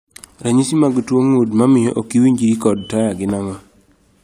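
Nothing technical goes wrong anywhere in this bit of speech, so there isn't a single fault to point to.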